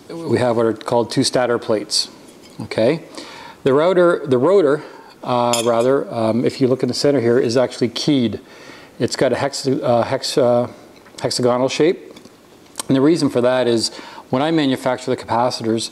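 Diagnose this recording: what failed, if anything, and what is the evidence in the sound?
The failure is at the storage or codec stage: a corrupt FLAC frame. Flipped bits reached the decoder, which did not reject the frame on its checksum. From the damaged bit onward, its linear prediction ran on wrong values and produced wrong samples. At 9.16 s this is heard as a disturbance of about 2 ms, with its error peaking at about -24 dBFS, which fits damage reaching across two frames. The audio resumes cleanly once the next intact frame decodes.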